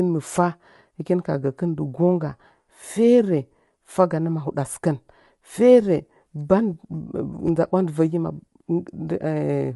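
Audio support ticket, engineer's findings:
Speech rough and grainy for the whole clip, coding damage plainly audible, noise filling between harmonics, nothing above 11.6 kHz. Likely low-delay AAC compression (AAC-ELD): short frames resolve pitch poorly; sound fits roughly 32 kbps, too few bits.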